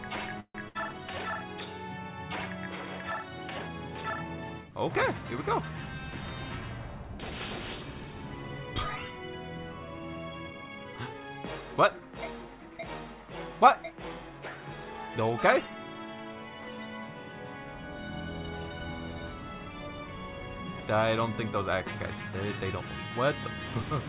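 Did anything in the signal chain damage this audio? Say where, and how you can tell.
Yes, in the network and jitter-buffer stage of a call path. The band stops at 4 kHz, which fits narrowband G.711 A-law.

From 0.40 to 0.56 s, a call audio freeze, likely from delayed packets draining the jitter buffer. The last sound is stretched into a fading buzz or hiss that ends in about 70 ms of silence. The audio then resumes where it stopped, so nothing is lost, only delayed by about 144 ms.

From 0.68 to 0.77 s, a burst of packet loss. A similar held, fading sound fills about 62 ms, but here about 60 ms of audio is gone when playback resumes. That missing stretch is what separates it from the freeze just before.

From 10.53 to 11.35 s, a jitter buffer speed-up. The sound runs at 116% speed with unchanged pitch, as short pitch-period slices totalling about 150 ms are cut out to shrink the buffer. 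Tape-style speeding would raise the pitch as well.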